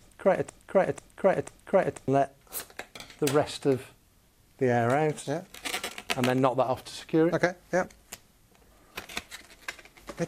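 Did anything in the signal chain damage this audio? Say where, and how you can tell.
Yes. From the very start to 2.08 s the audio is caught in a broken-record loop: a fragment of about 0.49 s plays three times back to back, already repeating when the clip begins. Each pass is identical and no quieter than the last, which rules out an echo or reverb tail, which would decay. The unbroken repetition also rules out a dropout stutter. This is likely a stalled player, encoder or stream buffer re-sending its last fragment, so the audio due in that span is lost.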